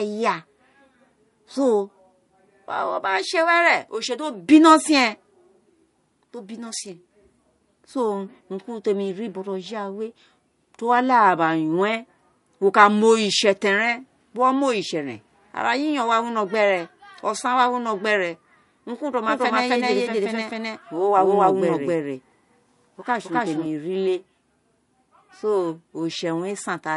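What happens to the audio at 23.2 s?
At 23.2 s a doubled audio track is running, from 19.28 s to 23.66 s: a full-band copy roughly as loud as the original trails by around 300 ms, likely from a second capture path or a misaligned edit, then stops abruptly. Throughout, plainly audible MP3 compression, which fits a rate near 48 kbps, leaves nothing above 11.1 kHz and adds watery, swirling artefacts from dropped spectral lines.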